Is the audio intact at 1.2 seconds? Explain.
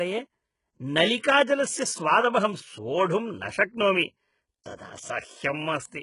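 No. From 1.21 to 1.24 s there is pre-echo: a short hiss about 28 ms long smears in just before a sharp speech onset, softening its attack. A transform codec spread its quantisation noise across the whole block, so noise meant to sit under the loud onset also fills the quiet gap ahead of it. On a spectrogram this shows as a thin, broadband haze directly before the onset. On a waveform it looks like low-level fuzz where there should be near-silence.

Underneath, the speech is heavily damaged throughout, most likely by HE-AAC compression at a very low bitrate, which fits something around 12 kbps. Only the lower band is really coded, and the treble is rebuilt by copying lower bands upward. S sounds therefore come out gritty and metallic, with harmonics that fail to line up across the crossover. On a spectrogram the upper band looks blocky and repeated, and everything stops sharply at 11.1 kHz.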